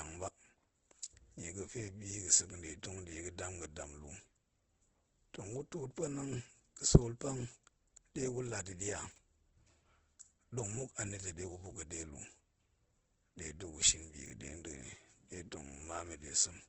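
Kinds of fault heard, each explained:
Opus compression: heavy codec damage, likely from low-rate Opus in music mode near 12 kbps, leaves the speech grainy and rough with nothing above 8.2 kHz.
Chunks out of order: 20 ms blocks play late, at 9.12 s and 14.26 s, so short stretches come out jumbled with hard joins.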